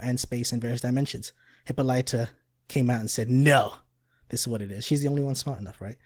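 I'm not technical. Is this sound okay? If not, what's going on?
No. Opus voice compression is plainly audible throughout the speech: the file was squeezed hard to save space, leaving the voice hoarse and slightly robotic from start to finish.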